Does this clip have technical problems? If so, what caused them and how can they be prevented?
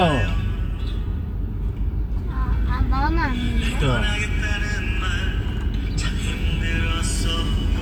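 No technical faults are audible.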